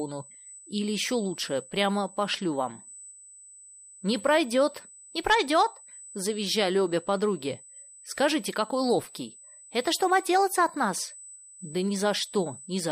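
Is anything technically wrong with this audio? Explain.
Yes. USB whine runs throughout the speech: a steady, fixed-pitch tone at 8 kHz, strongest at its 16 kHz harmonic and only roughly 10 dB below the speech. It is USB microframe current pulses leaking into the audio through power or ground.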